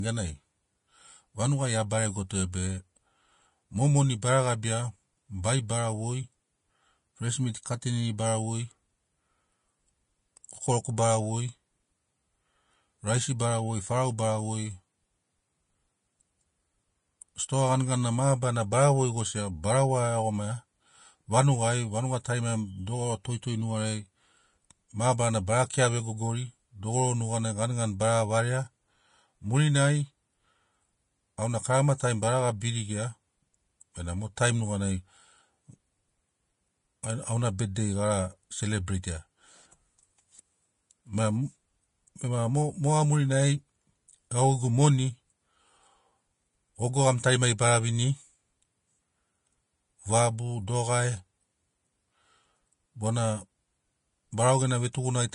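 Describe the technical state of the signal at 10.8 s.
At 10.84 s there is a pre-echo: a burst of hiss about 11 ms long that arrives just ahead of a sharp attack. The codec spreads quantisation noise across its whole transform block, so noise sized for the loud onset also fills the quiet instant before it. The attack sounds softened and smeared. On a waveform, a noisy ramp precedes the transient. On a spectrogram, a thin vertical smudge of broadband energy leads the onset.

Underlying this moment, as across the whole clip, is grainy, hissy speech with no content above about 10.6 kHz. This is likely Vorbis compression at a low setting, consistent with a bitrate around 32 kbps. Treble detail is quantised so coarsely that it turns into noise, which roughens tones and blurs consonant attacks. A spectrogram shows a hard horizontal ceiling at 10.6 kHz and speckled, patchy energy in the upper bands below it.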